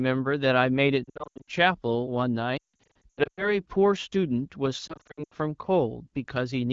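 Radio errors corrupted clusters of frames, so the decoder of this AMR wideband speech kept repeating its last good pitch and spectral settings at falling gain: lost AMR speech frames. It happens at 1.04 to 1.49 s, 2.57 to 3.58 s and 4.87 to 5.34 s, each time as scattered gaps with short runs of 80 ms, and one of 160 ms in the middle burst. That burst drops to near silence within two frames. The others warble and dip at single lost frames and fall near silent in their 80 ms runs, and the speech resumes thin for a moment.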